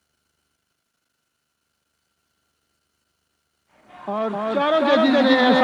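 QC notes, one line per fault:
Throughout, doubled audio track: every sound is followed by a second full-band copy about a third of a second later, at roughly the same level as the original, so each event lands twice as a hard, even slap rather than a fading echo. The repeat carries no decay or room colour and stays locked at that fixed gap, which points to the likely cause: the same signal mixed in again through a slower path.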